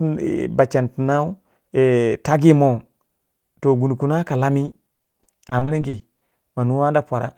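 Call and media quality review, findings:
Repeated packet loss, robotic sound, 4.65 to 6.45 s: rapid run of short holes up to 40 ms, patched by stretching prior audio. About a quarter of that stretch is concealed. Network/jitter buffer side.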